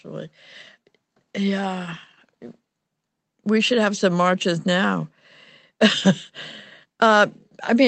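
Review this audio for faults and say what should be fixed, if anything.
Nothing to fix: the speech shows the ordinary sound of a WebRTC call path, top end stopping around 8 kHz, consistent with an Opus wideband setting, and no faults are present.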